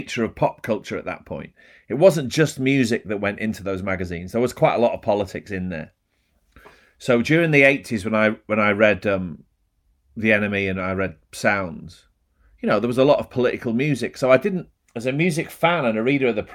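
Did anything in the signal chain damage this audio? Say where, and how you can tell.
No, no signal-chain damage heard.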